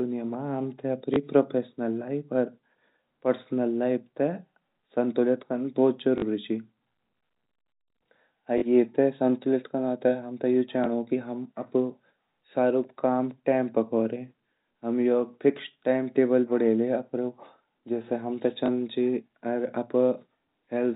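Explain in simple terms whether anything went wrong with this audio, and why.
Small blips and short robotic stutters break into the speech at 1.14–1.16 s (just before "प्रोफेशनल लाइफ अर"), 6.18–6.22 s, 8.58–8.62 s, 10.84–10.86 s (after "ते हमते यु") and 18.66–18.68 s (after "जेसे हमते"). This is packet loss with last packet repeated: chunks of 20 or 40 ms went missing, and the receiver filled each gap by replaying the previous chunk.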